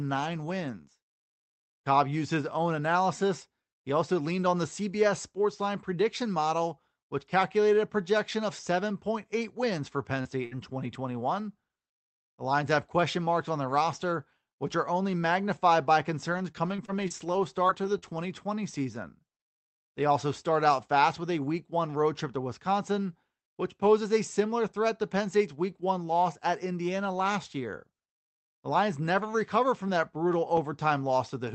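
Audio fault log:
10.21–10.27 s, short concealed packet loss: About 40 ms of audio never arrived in time, and the receiver covered roughly 34 ms of it by extending the preceding sound before crossfading back. The result is a brief smear or wobble rather than silence. On a spectrogram, harmonics stretch flat and slightly blurred for a few hundredths of a second. In the waveform, the repeated cycles appear as a short, unnaturally regular patch.
10.25–10.27, 10.51–10.53, 10.78–10.80 and 10.84–10.86 s, lost packet rebuilt from error correction: Four separate 20 ms packets were lost. Each was replaced by the low-bitrate copy carried in the following Opus packet, so nothing drops out. Those frames sound rougher and noisier because the copy holds less detail. A spectrogram shows 20 ms blocks where harmonics turn grainy and noise fills between them. The waveform stays continuous, with only a faint texture change.
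10.45–10.57 s, burst of packet loss: Several consecutive packets failed, leaving about 60 ms of real audio missing. The receiver held the last sound for about 65 ms, fading it as the gap continued, then resumed later in the stream, so that stretch is skipped. On a spectrogram, frozen horizontal harmonics decay before normal patterns return abruptly. The waveform shows a repetitive, shrinking envelope at the join.
16.32–18.24 s, repeated packet loss (robotic sound): Seven gaps recur across nearly two seconds, none longer than 36 ms. Together they total about 160 ms lost and roughly 146 ms concealed, close to 8% of the span. Around 0.7 s more is rebuilt from error-correction copies. The constant patching gives a choppy quality. A spectrogram shows short flattened bands repeating, with grainy stretches between them. The waveform shows little periodic repeats scattered along the passage.
30.33–30.81 s, CD scratch ticks: Three ticks, the longest about a millisecond, fall within half a second at a spacing that fits once-per-revolution damage. 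A blemish destroyed more data than error correction could restore, so the player interpolated or muted those samples, which produces clicks. A spectrogram shows thin vertical lines spanning the 8 kHz band left by the Opus call path. The waveform shows tiny flat notches or smoothed patches.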